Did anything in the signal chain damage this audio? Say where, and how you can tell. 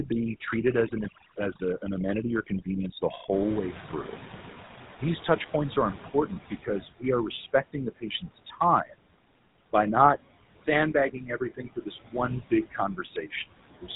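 Yes. Several processing stages damaged this speech clip.

Call processing, overdone noise removal: the suppressor is set far too aggressively. Individual frequency bands are pushed down or switched off whenever they sit close to its noise estimate, and low-level parts of the speech go with them. The pauses fall to near silence dotted with twinkling specks. On a spectrogram the background shows as scattered isolated dots on a dark field, and the speech harmonics look ragged and eaten away.

Call processing, noise suppressor artifacts: gain is set band by band, frame by frame, taking off about 17 dB where it judges the noise to be steady. The residue sinks between phrases and swells back under the speech. On a waveform the noise floor pumps up and down in step with speech activity. A spectrogram shows blotchy, shifting patches where a smooth noise texture would normally be.

Codec, GSM full-rate codec: the damage is plainly audible, a buzzy, gravelly roughness over the whole clip, consistent with a 13 kbps full-rate coder. 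The coder rebuilds the signal from a vocal-tract filter driven by regularly spaced pulses, keeping only a thinned-out excitation. A spectrogram shows a hard ceiling at 3.8 kHz with nothing above it, and coarse, grainy harmonics below it.

Call processing, noise suppressor catching up: the room noise, itself a normal part of the recording, rises by about 20 dB near 3.5 s. The suppressor's noise estimate lags behind that jump. From 3.31 to 6.86 s the louder noise comes through only lightly reduced, then sinks over roughly 3.5 s as the estimate adapts and the cut reaches about 14 dB. On a waveform the floor steps up abruptly, then slopes gradually back down.

Call processing, speech cut by the noise suppressor: parts of the speech were mistaken for noise and turned down with the background. This happens from 7.53 to 8.99 s (deepest drop about 22 dB, under half a second affected in total), from 10.93 to 13.32 s (about 19 dB, under a second in total), and at 13.71 to 13.9 s (about 18 dB, a brief moment). 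The affected parts sound swallowed or faint. A waveform shows sudden dips in the envelope, and a spectrogram shows gaps cut into the speech energy.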